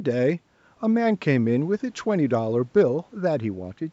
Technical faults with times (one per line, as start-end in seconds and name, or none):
none